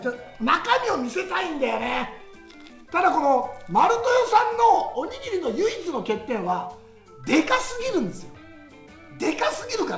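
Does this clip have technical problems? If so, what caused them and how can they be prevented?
No, there are no technical faults.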